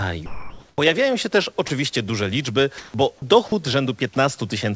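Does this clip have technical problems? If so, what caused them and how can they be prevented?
Yes. Speech briefly gives way to flat comfort noise at 0.26–0.78, 1.68–1.70, 2.78–2.94, 3.18–3.22 and 3.48–3.52 s, likely sound dropped by the voice detector, which misread quiet speech or a word ending as background. On a spectrogram, speech harmonics abruptly become smooth, even noise; the waveform flattens. Prevent it by making the detector less aggressive or disabling discontinuous transmission.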